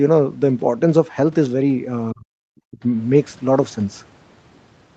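From 2.12 to 2.79 s the speech dips sharply, by around 40 dB at its deepest, and breaks up for about half a second in total. This is likely speech suppressed in double talk, where the echo canceller mistook the near talker for loudspeaker echo and attenuated it.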